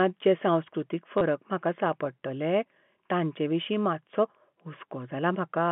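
Packet loss with the last packet repeated hits this telephone-band speech at 1.18 to 1.21 s: about 30 ms of audio was lost and a packet was replayed to fill the gap, causing a brief robotic stutter. The short buzz fits three lost 10 ms packets at a 100 Hz repeat rate. The surrounding G.711 telephone coding carries the 150 Hz to 3.4 kHz line band.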